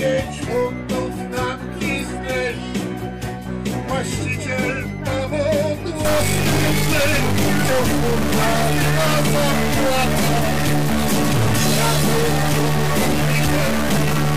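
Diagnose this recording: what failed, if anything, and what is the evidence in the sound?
From 6.05 s to the end the sound turns harsh and buzzy, and quiet passages fill with noise. This is likely a stuck bit at the converter or its data lines: one fixed bit shifts about half the samples by a step of roughly -15 dBFS, following the waveform.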